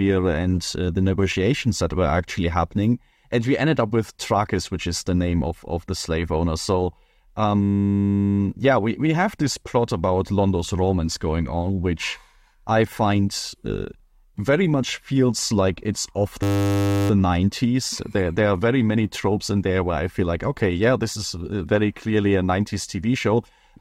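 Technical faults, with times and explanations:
7.63–8.39 s and 16.43–17.1 s, system hang loop: the speech halts twice and turns into a steady 100 Hz buzz. A single 10 ms slice repeats back to back, 76 times in the first event and 67 in the second, because the hardware kept replaying one small ring buffer while the system stalled. Speech picks up again with little or nothing missing. Unlike a dropout, there is no silence, and the loop is too short to give the machine-gun stutter of a longer buffer.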